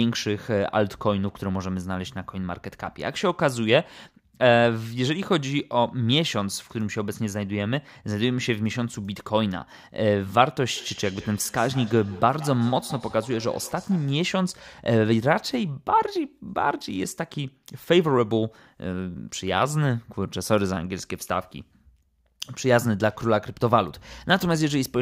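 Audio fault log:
10.64–14.27 s, feedback echo between two devices: the speech returns at a fixed spacing of roughly 150 ms, peaking about 19 dB below the direct sound. A second device in the room replays this microphone's signal and the microphone picks it up again, beyond the echo canceller's reach. The even spacing sets it apart from diffuse room reverberation.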